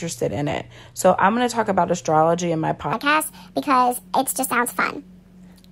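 From 2.93 s to the end at 5.72 s, the speech turns abruptly high and hurried, running 1.52 times as fast and about seven semitones higher. This section at the wrong speed was likely played against a mismatched clock, shifting speed and pitch together.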